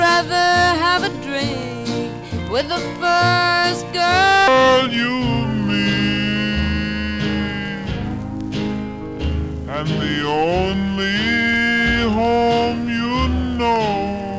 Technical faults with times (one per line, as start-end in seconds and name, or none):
4.48-14.39 wrong sample rate